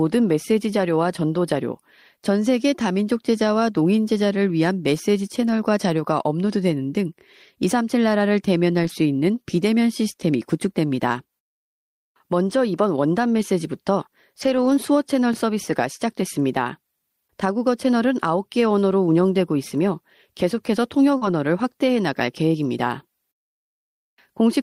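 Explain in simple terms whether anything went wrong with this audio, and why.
Lost packet rebuilt from error correction: pieces of the stream went missing, and the next piece carried a rough backup copy. So 4.93 s, 8.83–8.89 s, 14.41–14.71 s and 21.21–21.27 s sound rougher and noisier.

Overlapping chunks: the audio was handled in 10-second pieces that overlap slightly. About 13 ms plays twice at 15.34 s, heard as a quick click or stutter.

Short concealed packet loss: about 40 ms arrived too late at 21.17–21.23 s. The receiver filled it by continuing the previous sound, leaving a brief smear or wobble.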